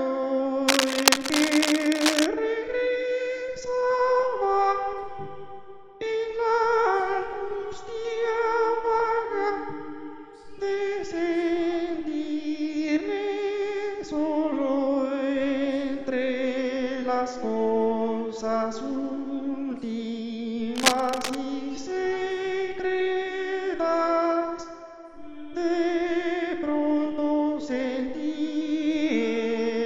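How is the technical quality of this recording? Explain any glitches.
Two bursts of cable scratch noise mar the recording. They run from 0.67 to 2.26 s and from 20.76 to 21.35 s. Each is a dense, ragged scratching at roughly the level of the sound itself. A worn cable or connector being moved is the likely cause, its contact resistance jumping rapidly.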